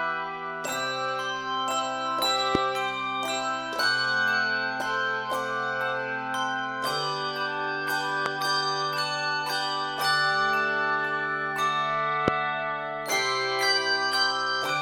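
Three loud pops break into the audio at 2.55, 8.26 and 12.28 s, each about 20 ms long and standing well above the surrounding level, the later two more so. Each is a single sharp thump with the sound continuing underneath rather than a gap or crackle, likely from an electrical pulse such as a switch or static discharge.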